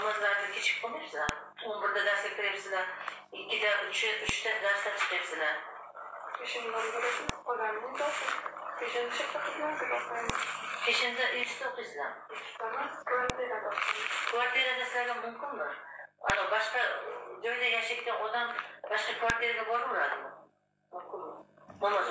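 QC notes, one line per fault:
1.29, 4.29, 7.29, 10.30, 13.30, 16.30 and 19.30 s: file header played as audio. A sharp, loud click hits every 3 s, whatever the sound is doing. Each marks a new 3 s piece joined with its header intact. Those header bytes play as a brief burst of samples.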